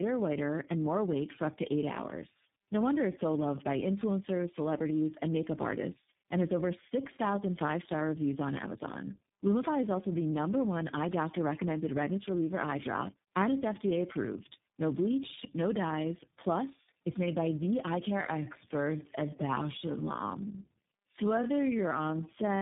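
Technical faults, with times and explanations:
Throughout: tandem speech coding. The speech was decoded and re-encoded three times through low-rate speech codecs, ending in iLBC, so each stage compounded the last's damage, giving rough, muffled, warbly speech. A spectrogram shows smeared formants and nothing above 3.8 kHz.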